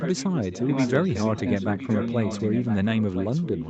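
Speech with an echo leak from 0.0 to 0.91 s and 1.08 to 3.69 s: a copy delayed about 1.01 s, roughly 10 dB down, likely far-end loudspeaker pickup the echo canceller missed.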